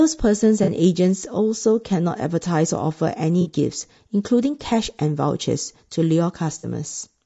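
A speech recording that sounds rough and grainy throughout, with noise between harmonics and a thin, synthetic top band, likely from low-delay AAC compression (AAC-ELD) at a bitrate around 32 kbps. Brief smeared, noisy patches of about 40 ms at 0.63–0.69 s, 3.41–3.48 s and 6.59–6.65 s are AAC frame loss with concealment, where the decoder fills dropped frames from earlier spectrum.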